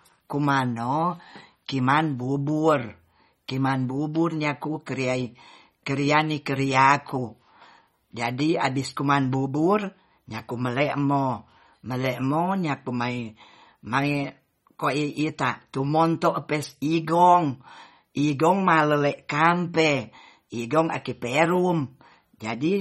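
Throughout the clip the speech sounds watery and swirly, with plainly audible codec damage and nothing above 15.3 kHz. The cause is likely MP3 compression at a bitrate that fits about 32 kbps, where weak frequency lines switch on and off between frames.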